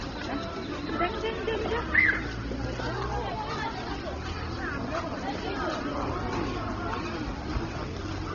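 An everyday-sound recording carries a steady, raspy mains buzz for its whole length, sitting roughly 20 dB below the sound itself. Its spiky character and harmonics climbing well into the kilohertz range point to switching interference locked to 60 Hz mains, entering through a dimmer, rectifier or poor shielding. Throughout the clip there is also nothing above 6.8 kHz, and artefacts of more than one flavour overlap. The likely cause is transcoding between lossy codecs, with a low-rate MP3-style encode followed by an even lower-rate Opus-style encode, the second compounding the first's damage.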